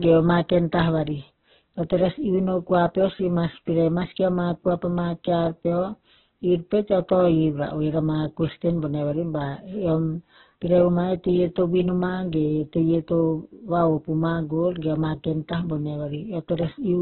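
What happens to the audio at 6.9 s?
At 6.9 s the speech sounds heavily degraded, grainy and rough, with a noisy edge, and nothing above about 4.2 kHz, so it comes across as narrowband. The damage runs through the whole clip. The likely cause is heavy Opus compression in its music (CELT) mode, which fits a very low rate of around 8 kbps: the encoder narrows the bandwidth and, short of bits, fills bands with folded or noise content instead of leaving holes.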